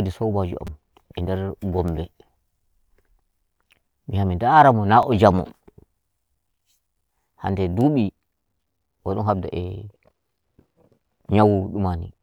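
Twice in this speech, fresh audio failed to reach the device in time, so it replayed its last buffer, roughly 5 ms long. This is a repeated buffer fault. At 0.67 s the chunk sounds three extra times, and at 5.03 s, after "mi ndara mo na", once more. Each repeat is a tiny click-like buzz, with essentially nothing dropped.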